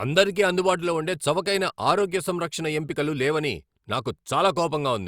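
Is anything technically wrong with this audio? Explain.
No, nothing in this speech recording points to a technical problem in how the signal was captured, processed or delivered.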